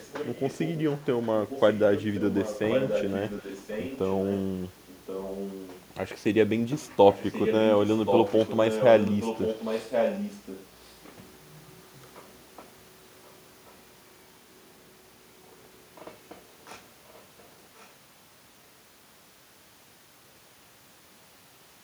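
A delayed copy of the speech trails it by about 1.08 s from 0.0 to 4.41 s, 4.87 to 5.84 s, 7.12 to 10.9 s (loudest) and 17.07 to 17.89 s (barely audible). This is likely echo leak, where a loudspeaker end's echo canceller let its microphone pickup return.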